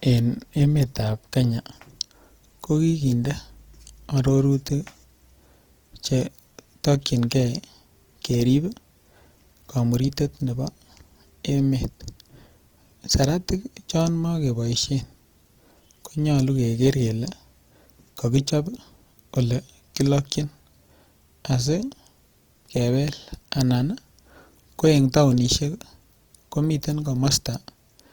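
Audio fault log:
throughout: Opus compression, likely in music mode near 24 kbps; short of bits, bands get noise-filled, so speech sounds plainly rough and grainy.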